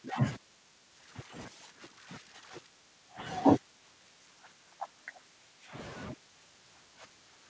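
No technical faults can be heard in this speech.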